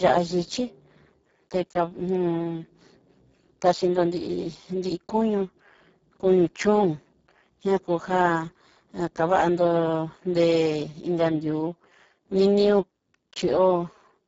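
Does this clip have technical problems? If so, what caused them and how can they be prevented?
Yes. Throughout the clip, a Speex codec running at a very low quality setting, consistent with a bitrate near 6 kbps, leaves its CELP excitation with too few bits. The speech is heavily degraded, hoarse and noisy, with nothing above 7.7 kHz. Encoding at a higher Speex quality setting, or switching to a modern codec such as Opus, prevents this.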